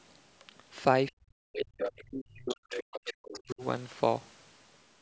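From 1.1 to 1.75 s, the echo canceller likely failed to separate the talker from loudspeaker echo while both sides spoke. This speech suppressed in double talk pulls the voice down by as much as about 40 dB, in broken pieces adding up to roughly half a second. From 1.53 to 1.58 s and from 1.77 to 1.93 s, echo the canceller likely left in the microphone signal comes through as the other side's voice leaking through: a second voice about 10 dB and then about 5 dB below the talker. From 1.93 to 3.62 s the suppression returns, cutting the voice for about a second and a half in total. Fainter leaks, around 15 to 20 dB down, surface from 2.48 to 2.54 s, from 2.74 to 3.0 s and from 3.3 to 3.53 s.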